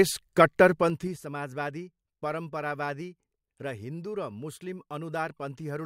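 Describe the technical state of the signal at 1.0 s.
At 1.0 s the speech is inside a stretch of zipper noise running from 0.77 to 1.20 s. The level falls by about 15 dB in unsmoothed 3 dB steps, roughly ten per second, and each jump leaves a small click, heard as a rapid ticking over the fade.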